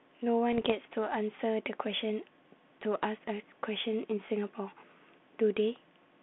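From 0.52 to 0.72 s, bit errors on an ADPCM link throw off the decoder's step size, giving pops and rough, level-jumping bursts that ring briefly.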